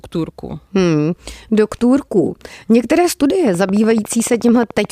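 Something, likely interference from nearby equipment or a faulty connection or power supply, injects a steady stream of pulses into the signal from 3.47 s to 4.86 s. The result is a train of clicks: about twenty near-identical ticks at a regular 13.8 per second, peaking a few decibels above the speech. The ticking sits on top of the speech throughout that stretch and stays audible in any gaps between sounds.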